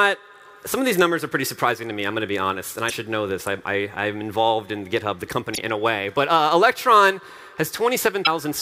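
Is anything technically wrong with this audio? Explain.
Yes. Damaged data in a compressed stream produces three short bursts, at 2.86–2.92 s, 5.53–5.58 s and 8.22–8.28 s, each lasting about 55 ms and recurring roughly every 2.7 s. In each, the decoder is fed corrupted bytes, misreads the frames and loses sync until it finds a valid frame header. The result is a brief chirp, squawk, click or short hole.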